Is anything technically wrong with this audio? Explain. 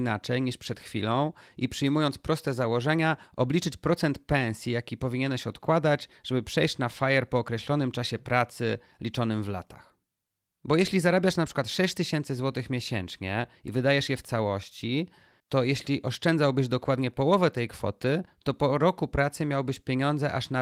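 No, nothing stood out on listening to this speech recording.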